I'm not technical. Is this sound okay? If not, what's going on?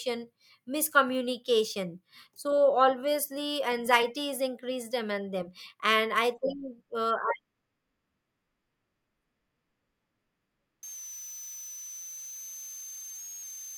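No. From 10.83 s to the end there's a switching supply whistle: a thin tone between 6.1 and 6.5 kHz, leaking from a power supply.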